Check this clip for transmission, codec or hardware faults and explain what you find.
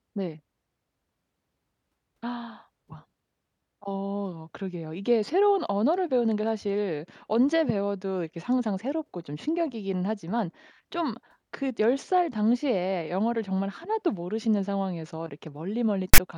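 One fault turns up near the end of the speech. At 16.14 to 16.18 s, file tags played as audio: the decoder read a block of text tags as samples, producing a loud, hard-edged rasp lopsided to one side.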